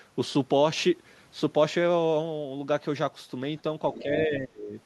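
From 3.93 to 4.03 s a faint second voice, roughly 15 dB under the speech, slips in: the other side's voice leaking through, likely residual loudspeaker echo the canceller missed. At 4.00 to 4.08 s the speech dips slightly, then from 4.26 to 4.73 s it sinks to near silence. This is speech suppressed in double talk, likely the canceller turning down both voices at once.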